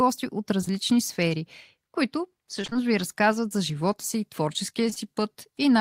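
Around 0.61 to 0.72 s, and again at 4.90 to 4.98 s, you get short concealed packet loss: about 20 ms chunks went missing, the decoder stretched the last sound over them, leaving brief smears. Between 2.62 and 2.84 s it's repeated packet loss, four 20 ms holes patched nearly half the span, so the speech turns choppy and robotic.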